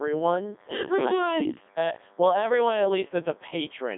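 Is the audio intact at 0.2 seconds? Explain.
No. At 0.2 s, a DECT cordless phone buzz, present throughout, comes from radio bursts every 10 ms being rectified into a thin 100 Hz buzz, roughly 35 dB below the speech. The Codec 2 vocoder damage, also present throughout, resynthesises the speech from sine waves, sounding robotic and buzzy, with nothing above 3.7 kHz. This fits a rate near 3.2 kbit/s.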